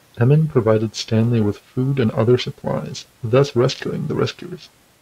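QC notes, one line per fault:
0.48 s to end: periodic clock jitter. A rough, metallic edge coats the speech. The converter clock wobbles at around 1 kHz, spraying sidebands around every component.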